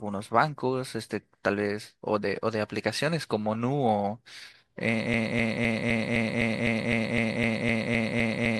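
At 5.14 s the speech locks into a broken-record loop: a 255 ms fragment repeats exactly, about 14 times, until the end, likely from a stalled player or stream.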